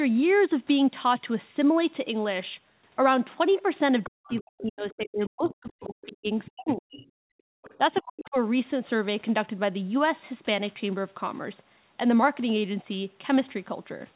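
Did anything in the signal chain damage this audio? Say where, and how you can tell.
Yes, in the call processing stage. Other side's voice leaking through appears from 4.03 to 6.07 s, 6.45 to 7.06 s and 7.62 to 8.02 s, a second voice roughly 20 dB under the speech, likely residual loudspeaker echo the canceller failed to subtract.

Speech suppressed in double talk shows from 4.07 to 7.07 s and 7.78 to 8.36 s, overlapping the leaked voice. The talker's speech dips by up to around 40 dB, about two and a half seconds in total, likely the canceller attenuating everything while both ends were active.

Background gated by the echo canceller occurs from 7.35 to 7.62 s. The room tone drops by about 40 dB for roughly 0.3 s, then recovers. The canceller clamped the microphone hard while the loudspeaker was playing and released it afterwards.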